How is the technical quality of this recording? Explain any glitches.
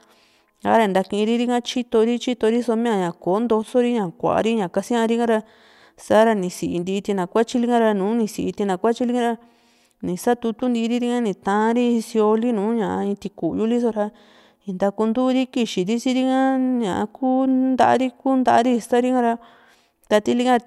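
The recording has one brief glitch. From 3.63 to 3.68 s, just before "ña kuari kasiárika ra", the speech abruptly drops by about 6 dB and then returns. The likely cause is one channel dropping out: losing one stereo side halves the shared signal after the mono sum. On a waveform it looks like a sudden 50 ms notch in amplitude. On a spectrogram it appears as a thin vertical band that is uniformly dimmer across all frequencies.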